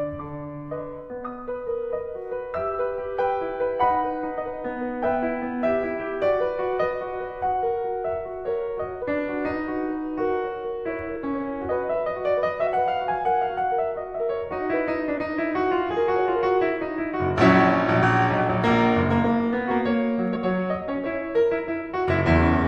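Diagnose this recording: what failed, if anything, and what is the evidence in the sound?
Compressed frames skipped in the codec stage. The music jumps forward at 9.02, 11.15, 12.66, 15.17, 18.02 to 18.04 and 20.35 to 20.37 s, losing around 50 ms, roughly two frames each time.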